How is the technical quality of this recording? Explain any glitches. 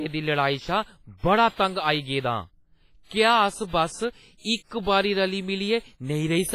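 The recording has clear codec damage from start to finish. Throughout, the speech sounds washy and ringing, with a hiss that swells and fades with the voice and no content above 15.5 kHz. This is likely WMA compression, smearing quantisation noise across long transform blocks and zeroing weak components, as a low bitrate near 24 kbps would.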